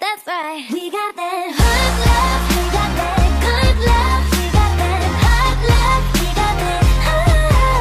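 No technical faults are audible.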